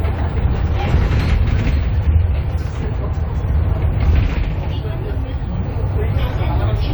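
No technical faults are audible.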